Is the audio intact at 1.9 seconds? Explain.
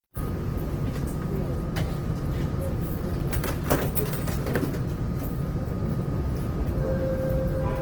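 No. Opus compression runs through the whole clip, 1.9 s included, likely starved of bits at a rate near 16 kbps. Its music mode fills bands with folded or noise content, so tones sound plainly rough, grainy and noisy, though the band reaches about 20.4 kHz.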